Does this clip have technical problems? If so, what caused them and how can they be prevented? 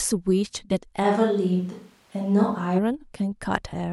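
Yes. From 1.05 s to 2.77 s the speech turns roomy and hollow, with thinner bass. The level barely changes. Room noise sits roughly 35 dB below the speech. Both changes are abrupt. This is likely a switch to a distant microphone after the close one dropped out. Monitor the close microphone during recording and keep a backup close source, such as a second lavalier.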